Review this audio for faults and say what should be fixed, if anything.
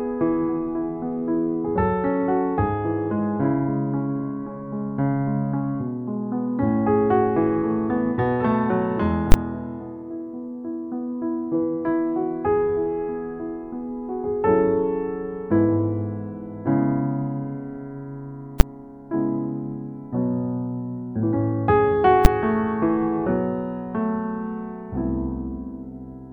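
A calculation in the processing chain returned infinite or invalid numbers, and these were clamped to the largest positive or negative sample value, giving invalid numbers at full scale. The output is pinned at the limit for each affected block, so the sound is replaced by loud bangs: a 20 ms burst from 9.32 to 9.34 s, then two shorter 10 ms hits at 18.6 s and 22.25 s. Each block is brief enough to be heard as a single sharp crack. To prevent it, check for invalid values such as divide-by-zero or overflow, and replace any non-finite sample with silence before output.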